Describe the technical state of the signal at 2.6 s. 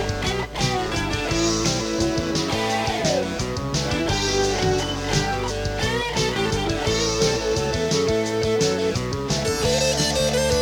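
At 2.6 s the signal is intact, with no dropout, clipping, distortion or other audible fault.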